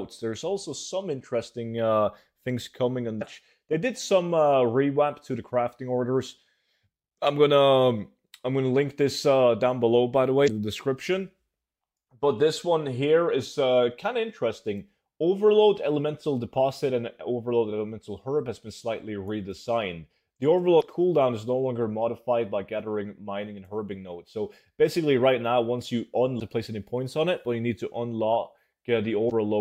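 The audio carries five short bursts of damaged data in a compressed stream, at 3.18–3.22 s, 10.44–10.48 s, 20.78–20.83 s, 26.37–26.42 s and 29.27–29.31 s, each roughly 40 ms long. Corrupted bytes make the decoder misread those frames and lose sync until it finds the next valid header. On a spectrogram each appears as a brief break in the surrounding texture, and on the waveform as a short disturbance.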